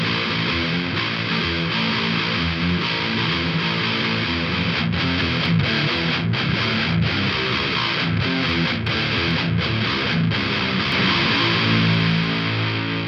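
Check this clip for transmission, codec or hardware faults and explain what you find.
One fault turns up near the end. From 10.92 s to the end of the clip, every sound is followed by a second, identical copy roughly 300 ms later, at about the same level as the first, so everything seems to stutter and overlap. The copy is full-band, with no decay or room colour, and it cuts in abruptly. This is a doubled audio track, likely from the audio being captured again along a slower path and mixed back in a fixed time behind.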